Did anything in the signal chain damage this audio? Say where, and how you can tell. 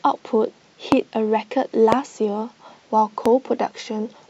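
Yes. Loud pops at 0.92, 1.92 and 3.26 s, each a single sharp thump about 20, 20 and 15 dB above the speech, which carries on beneath. These are likely voltage spikes entering the analogue wiring, from a switch or static, shaped into brief pulses downstream.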